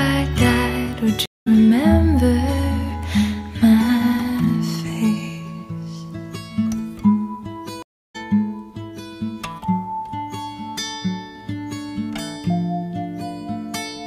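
At 1.26 s the audio drops out for about 0.21 s and comes back at 1.48 s. At 7.83 s it drops out again for about 0.32 s, resuming at 8.16 s. Both are stream reconnects: the connection broke, playback went silent, and a new decoder picked up mid-stream. The material does not continue where it stopped. It jumps ahead by roughly a fifth of a second after the first gap and roughly 0.4 s after the second.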